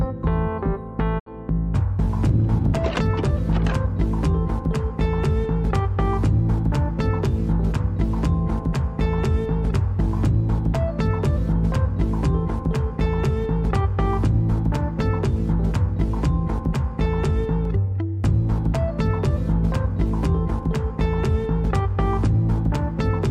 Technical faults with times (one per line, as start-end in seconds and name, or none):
1.18-1.28 digital broadcast dropout